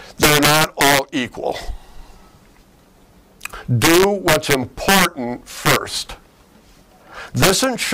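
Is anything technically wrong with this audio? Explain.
Yes. Integer overflow occurs four times: from 0.23 to 0.99 s, from 3.82 to 5.05 s, from 5.66 to 5.76 s, and from 7.43 s to the end. The loudest peaks are driven past the integer limit, by about 2 dB in the first stretch and about 1 dB in the others. Instead of being held at the ceiling, those samples wrap to the opposite sign. The waveform jumps across its full range. The result is harsh, violent cracks on loud moments, far sharper than ordinary clipping.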